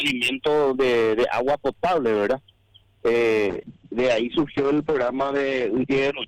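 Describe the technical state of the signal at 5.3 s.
At 5.3 s the signal sits inside a call bitrate drop lasting from 3.52 s to the end. The encoder's rate fell from 96 to 9 kbps and its bandwidth narrowed from 20 to 8 kHz, so the sound is coarse, rough and muffled.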